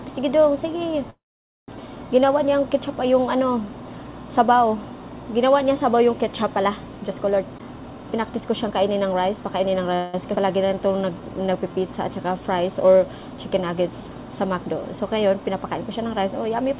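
At 1.1 s, packets were likely held up in transit and the jitter buffer ran dry, so the receiver stretched the last sound to cover the wait. This call audio freeze lasts until 1.69 s, about 0.58 s. A brief fading continuation gives way to roughly 0.49 s of silence. The audio then resumes where it left off, so nothing is lost but a gap is inserted. The whole clip shows the narrow band of a call codec, with nothing above 4 kHz, which fits G.711 mu-law.

From 7.36 s to 9.88 s the buffer had built up more audio than its target, so the receiver trimmed short pitch-period pieces again and again to cut the delay. This jitter buffer speed-up runs the sound at 117% speed with pitch unchanged, removing around 0.4 s in total, and it sounds noticeably hurried.

At 9.94 s a second call audio freeze follows, with the stall again likely down to delayed packets. This one fills 0.19 s up to 10.15 s with the fading continuation alone, no silence, before the audio carries on intact.

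From 10.66 s to 11.88 s the buffer was running low or had just raised its target delay, so the receiver repeated single pitch periods to rebuild its reserve. This jitter buffer slow-down plays at 88% speed at the same pitch and adds 0.16 s. Sounds are drawn out.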